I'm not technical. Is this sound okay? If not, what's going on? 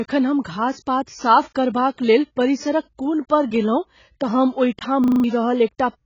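No. Throughout, the speech sounds dull and watery, with nothing above about 7.1 kHz. This is likely AAC compression squeezed too hard. Unlike a simply muffled microphone, it adds a warbly, fizzy smear on hissy sounds like s and sh.

From 5.04 to 5.24 s there is a system hang loop. The computer briefly froze while the sound hardware replayed the same 40 ms snippet five times, giving a buzzy stutter at 25 repeats per second. Unlike a dropout, you hear a repeating fragment rather than silence, and about a fifth of a second of the real speech is lost.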